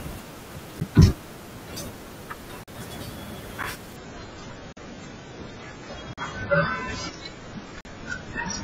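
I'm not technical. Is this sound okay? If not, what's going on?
No, it has two kinds of problems. The first is a block of digital silence, where the sound drops out for a split second and comes straight back with no fade. It happens at 0.80 s, 2.64 s, 3.63 s, 4.73 s, 6.13 s and 7.81 s. The short ones, about 11 ms, sound like ticks, and the longer ones, about 43 ms, sound like tiny holes. It's what you get when the player doesn't hand over the next chunk of audio in time.

The second is an adaptive stream at a lower bitrate. From 3.96 s to the end, the stream switches down to a much cheaper version, probably because the connection slowed. It happens suddenly, without a gap. The speech loses its crisp top end, with nothing left above about 7.5 kHz, so it turns duller and a bit watery, with more of that swirly compression grit.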